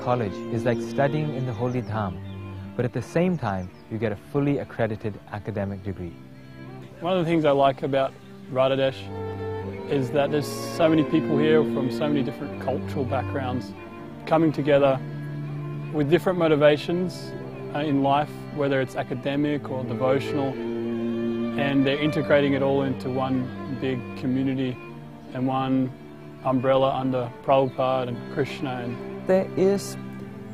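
A drift correction step runs from 10.27 to 10.84 s: the audio suddenly plays 5.3% fast and 89 cents sharp, nearly a semitone, then snaps back. The cause is likely clock-matching software changing the playback rate in one step to rebalance its buffer.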